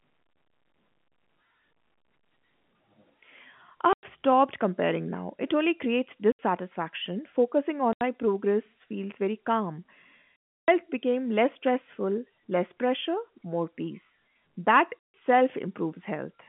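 Packet loss filled with silence cuts the speech at 3.93, 6.32, 7.93, 10.44 and 15.01 s, for about 100, 70, 80, 320 and 150 ms. Every gap is a multiple of 10 ms, which fits 10 ms packets. Each missing packet was replaced by dead silence, so the gaps have hard edges, over a G.711 telephone band of roughly 150 Hz to 3.4 kHz.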